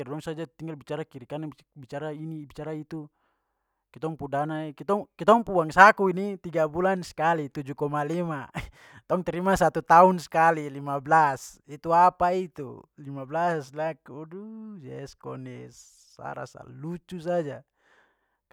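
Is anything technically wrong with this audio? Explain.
No, nothing technically wrong turns up anywhere in this speech recording.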